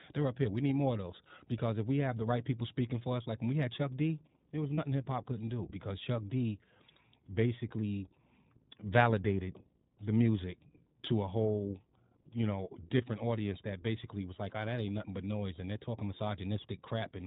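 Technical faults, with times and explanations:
Throughout, iLBC codec: the speech has been squeezed through a narrowband VoIP codec, so nothing above 4 kHz survives and everything sounds boxed-in and telephone-like. The damage is plainly audible, a slightly rough, synthetic edge on the voice. What you hear fits iLBC at around 15.2 kbps with 20 ms frames, each frame's excitation coded on its own with no help from the one before.
4.74 to 4.80 s, lost iLBC frames: right after "there was", about 40 ms drops out, consistent with two lost packets. The decoder papers over it by repeating the last pitch cycle with some noise mixed in, so you get a brief held, buzzy vowel instead of a hole. Since iLBC frames stand alone, the voice snaps back cleanly by "hip hop couldn't do", with no lingering smear.
12.98 to 13.02 s, lost iLBC frames: a shorter one, about 20 ms, after "a whole you know", which fits a single lost frame. 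Same concealment trick, a quick repeated pitch cycle with a touch of breathiness, so it comes across as a tiny sustained blip rather than silence. Recovery is immediate again, and "audience that basically was" comes through.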